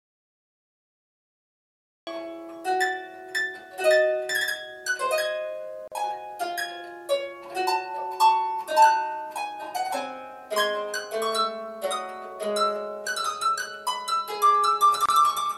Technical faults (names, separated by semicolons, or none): audio dropout to silence; gap at a join of encoded pieces